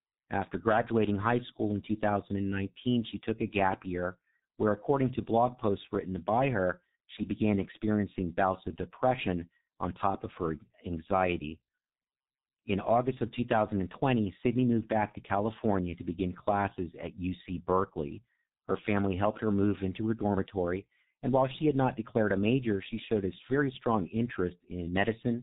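G.723.1 codec damage runs throughout the speech, heavily: 30 ms frames at a bitrate near 6 kbit/s discard everything above 4 kHz, leaving muffled, hoarse tone and smeared consonants.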